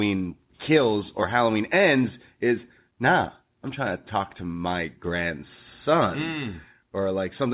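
No technical faults are audible.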